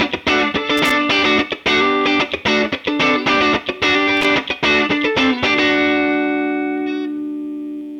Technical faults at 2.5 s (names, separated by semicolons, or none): none